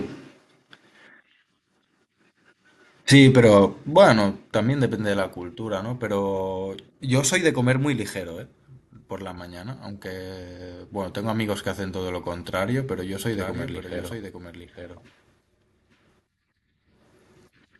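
From 13.26 s to the end, the speech picks up a doubled audio track: a second full-band copy trails the original by about a second, roughly 10 dB quieter. It most likely comes from the same signal being captured again through a slower path. Unlike an echo or reverb, the copy has no decay tail or room colouring and does not repeat. It simply cuts in abruptly and then runs alongside the original, out of step.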